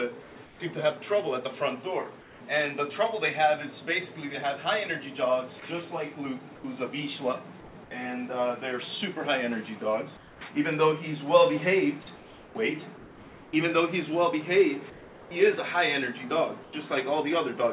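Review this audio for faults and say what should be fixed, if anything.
Comfort noise in place of the background appears at 0.22–0.6, 2.21–2.4, 5.6–7.75, 10.17–10.41, 12.16–13.53, 14.9–15.31 and 16.63–16.73 s. In each pause the natural background gives way to a smooth, textureless hiss, about 3–4 dB quieter where the background sits about 21–24 dB below the loud passages. The likely cause is discontinuous transmission: the sender stops sending during pauses and the receiver synthesises noise. On a spectrogram the background's fine structure turns into an even, uniform wash, capped at 4 kHz like the rest of the band-limited call path, which fits G.711 mu-law. The waveform shows a slightly lower, featureless noise floor. Prevention: disable DTX, or tune comfort noise to match the real background level and spectrum.

Sound dropped by the voice detector occurs at 5.6 s, where the detector likely mistook sound for background: about 10 ms of genuine sound is lost and 20 ms is replaced with the same synthetic noise just as a pause begins. 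On the waveform the sound is cut abruptly into flat low-level noise, and on the spectrogram the energy ends in a hard vertical edge. Prevention: add hangover time to the voice detector so trailing sound is still sent.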